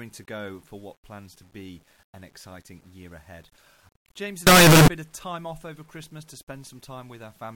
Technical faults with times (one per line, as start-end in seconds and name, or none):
4.47-4.88 signed and unsigned mixed up